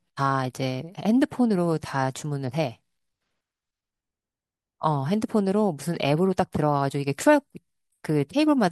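Nothing in this short stretch of speech points to a technical problem, so there's nothing to flag.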